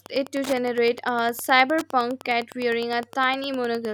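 From start to finish the speech carries Wi-Fi interference: a nearby Wi-Fi radio's beacon, sent every 102.4 ms, is being picked up and rectified by the audio circuit. It comes through as a steady ticking just under ten times a second, sitting roughly 20 dB below the speech. On a spectrogram it shows as evenly spaced, thin vertical broadband lines; on the waveform, as a regular train of small sharp spikes.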